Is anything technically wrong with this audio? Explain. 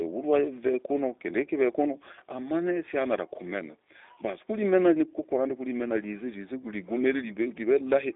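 Yes. G.729 codec coding runs through the whole speech clip. The coder rebuilds each 10 ms frame from a vocal tract filter, a pitch predictor and a handful of pulses, which fits the 8 kbit/s G.729A variant. The damage is plainly audible: speech has a rough, slightly synthetic texture. The sound is confined to a telephone band of about 300 Hz to 3.7 kHz, with nothing above 3.8 kHz, so it sounds muffled and narrow.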